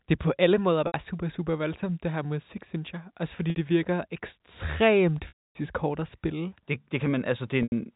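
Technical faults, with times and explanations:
0.87–0.94 s, 3.50–3.56 s, 5.28–5.55 s and 7.63–7.72 s, packet loss with pitch repetition: the receiver loops the last pitch period over each gap, and the 60 to 90 ms gaps give a brief buzzy hold. The 270 ms loss after "virker ekstremt" fades to silence, then speech cross-fades back.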